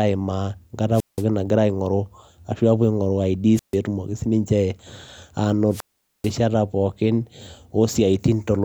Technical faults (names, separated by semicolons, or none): wireless microphone squelch dropout